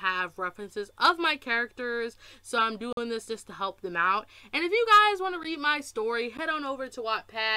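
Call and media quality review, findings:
Block of digital silence: about 46 ms hole at 2.93–2.97 s, plus roughly 12 ms ticks at 5.43 s and 6.37 s. Hard cuts to silence. Output buffer likely not filled in time; lengths fit 2048- and 512-sample buffers.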